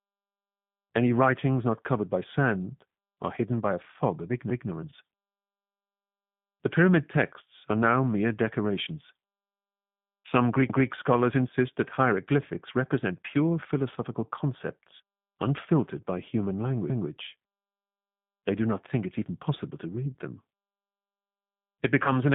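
Throughout, the speech passes through a G.729 codec, which fits an 8 kbit/s G.729A link. The decoder rebuilds each 10 ms frame from a vocal tract filter, a pitch predictor and a few pulses, and the line band runs only from about 150 Hz to 3.6 kHz. The speech sounds plainly rough and synthetic.

At 4.90 to 4.93 s, VoIP packet loss concealed by the speech codec occurs. About 20 ms of audio goes missing, which fits a single lost packet. The decoder extends its last pitch and filter state, so the sound briefly smears into a fading buzzy tone or coloured noise.

At 16.90 to 17.10 s, overlapping chunks appear at a join between processing blocks that fits 6-second chunks. The new chunk starts 200 ms before the previous one ended, so that 200 ms plays twice and the speech audibly stutters.

At 22.04 to 22.11 s, VoIP packet loss concealed by the speech codec strikes again, losing roughly 20 ms, consistent with one packet. 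Concealment stretches the last frame into a fading buzzy tone or coloured noise, and the speech stays weakened briefly as the decoder recovers.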